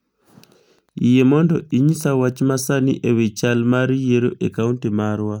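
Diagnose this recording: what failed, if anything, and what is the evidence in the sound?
Wi-Fi interference from 0.78 s to 3.11 s, ending just before "ewi chal mar", is an analogue wiring fault: a faint ticking, far below the speech, repeats every 102.4 ms, about ten per second. A nearby Wi-Fi radio's beacon is being rectified in the audio circuit.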